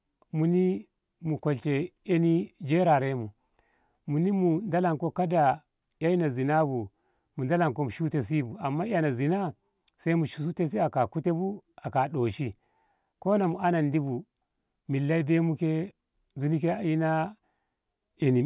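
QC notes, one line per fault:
Nothing stood out on listening to this speech recording.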